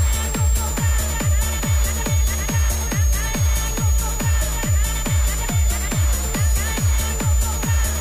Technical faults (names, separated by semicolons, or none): switching supply whistle